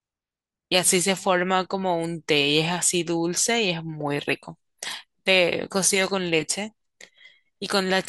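Speech, with no technical faults to be heard anywhere.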